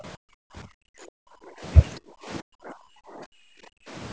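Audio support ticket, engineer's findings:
Speech suppressed in double talk, 0.00–1.65 s and 1.98–3.93 s. Speech level dips hard and breaks up in pieces, deepest drop about 40 dB in the first span, about 35 dB in the second. Most of each span is affected. Likely cause: echo canceller/suppressor misreading near-end speech as loudspeaker echo during simultaneous talk and attenuating it. Waveform: choppy, collapsing envelope. Spectrogram: speech energy fading or vanishing in blocks, against a band limit at 8 kHz from the call microphone path.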